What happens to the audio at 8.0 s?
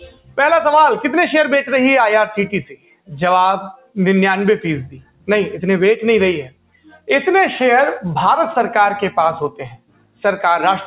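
At 8.0 s the noise suppressor applied to music or sounds is still at work, as it is for the whole clip. A suppressor tuned for speech treats sustained tones and decaying tails as noise, letting onsets through and then cutting what follows by around 15 dB, so the sound pumps and thins. Unlike a compressor, it reacts to steadiness rather than level. The separate ceiling at 4 kHz is just the narrowband call codec.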